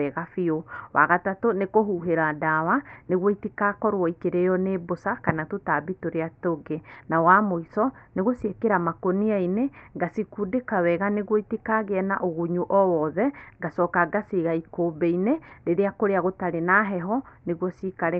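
No technical faults are audible.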